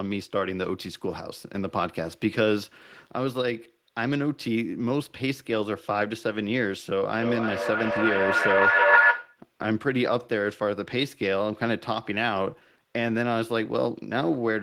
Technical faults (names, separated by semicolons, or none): feedback echo between two devices